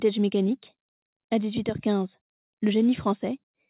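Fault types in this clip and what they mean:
No faults present; the sound stops at 4 kHz, which fits a narrowband call path such as G.711 mu-law at 64 kbps and is expected behaviour for that route.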